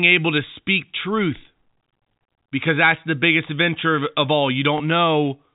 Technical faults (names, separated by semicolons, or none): packet loss with last packet repeated